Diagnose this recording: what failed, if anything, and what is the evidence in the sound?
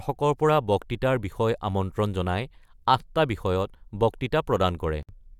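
At 5.03 s the speech drops into a silence of about 59 ms with smeared edges, then resumes where it stopped. This is a gap at a join of encoded pieces: at the codec stage, separately encoded segments were spliced untrimmed, keeping start delay and last-frame padding.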